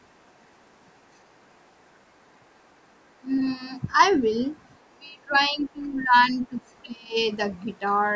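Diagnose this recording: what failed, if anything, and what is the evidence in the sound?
Call processing, speech suppressed in double talk: the speech dips by about 20 to 25 dB at 4.95–6.63 s and 6.82–7.16 s. It is likely echo-canceller ducking, since it sags in pieces rather than dropping to clean network silence.

Call processing, other side's voice leaking through: a faint second voice, about 40 dB below the speech, appears at 6.66–6.73 s. It is likely residual loudspeaker echo and is distinct from distortion of the talker.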